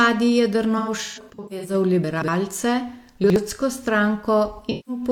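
AAC frame loss with concealment, 0.78 to 1.74 s: about 0.47 s of audio goes missing in scattered gaps, the longest run around 150 ms. The decoder patches each gap from the last good spectrum, giving smeared, noisy, phasey stretches. The same happens at 4.53 to 5.02 s, with about 0.21 s lost.

Chunks out of order, 2.04 to 2.28 s and 3.24 to 3.36 s: a 60 ms chunk plays late, three chunk positions behind at the first point and one behind at the second. The sound jumbles briefly around the hard joins.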